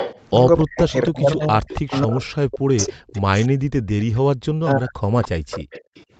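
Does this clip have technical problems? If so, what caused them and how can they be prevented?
Yes, three kinds of problem show up. First, there's echo leak: a delayed copy of the speech trails the original by 281 ms, from 0.0 to 2.01 s, 2.8 to 3.21 s, 3.88 to 4.2 s and 5.22 to 6.04 s. It's strongest at the start, roughly 10 dB under the main speech, and fades to a faint ghost by the third stretch. That's likely a loudspeaker on the far end whose echo canceller didn't fully subtract what its mic picked up, so the residue got sent back. Using a headset, or tuning the canceller so it converges properly on that room, would keep it out.

Second, there's speech suppressed in double talk, from 0.62 to 3.49 s and 4.58 to 5.1 s. The speech dips and chops in pieces, bottoming out around 40 dB down, about a second and a half in total in the first stretch and half a second in the second. Both sides were talking at once there, and the canceller likely couldn't tell its own talker from the loudspeaker echo, so it turned everything down. 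A canceller with better double-talk detection, or a headset so there's no echo to fight, prevents it.

Third, there's background gated by the echo canceller, at 3.49 to 3.69 s and 5.4 to 5.95 s. The room sound ducks for a moment, by about 19 dB the first time and about 40 dB the second, then comes back. That's the canceller clamping the mic hard while the loudspeaker played and releasing afterwards. Gentler suppression settings, or comfort noise to fill the gaps, would smooth it over.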